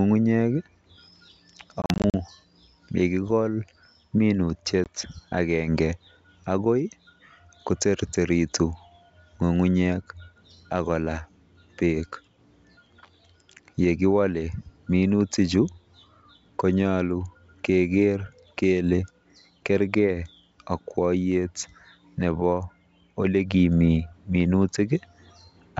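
From 1.82 to 2.15 s, packet loss on an ADPCM call drops about 160 ms of audio in short silent gaps, the longest 40 ms, spread over 320 ms. This points to several lost packets. Each gap has a hard edge, and the sound returns slightly distorted while the decoder's predictor and step size resynchronise with the sender. A single 20 ms gap at 4.84 to 4.89 s does the same.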